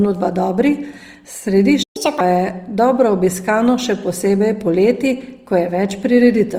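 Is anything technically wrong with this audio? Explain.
Yes, a few things. All the way through, the speech has a rough, grainy texture from band-filling at low bitrate, likely Opus compression in CELT mode at around 24 kbps. At 1.83 s the sound cuts out until 1.97 s, a gap of roughly 120 ms where the player went silent waiting for data, likely a playback stall. Straight after, from 1.97 to 2.21 s, there's catch-up at higher speed: the backlog plays at 1.5x, so the speech briefly jumps up around seven semitones, then settles back.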